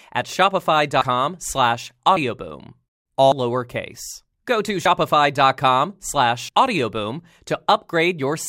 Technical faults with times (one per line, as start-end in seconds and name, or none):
1.01 compressed frames skipped
2.16 compressed frames skipped
3.31 compressed frames skipped
4.85 compressed frames skipped
6.48 compressed frames skipped